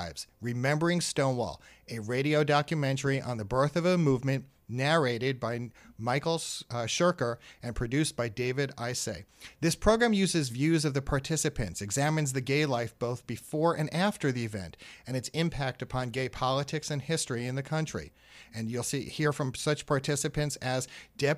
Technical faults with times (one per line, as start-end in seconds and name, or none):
none